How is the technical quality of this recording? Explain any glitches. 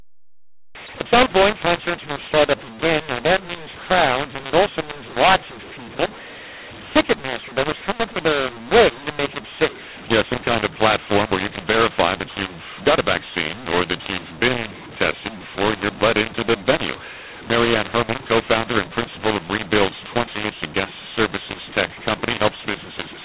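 Poor, because of one fault that runs through the whole clip. From start to finish, mu-law and A-law are mixed up: the speech was coded with A-law but decoded as mu-law. That scrambles sample levels, giving harsh, distorted speech and noise-filled pauses. The underlying G.711 telephone coding itself still limits everything to below 4 kHz.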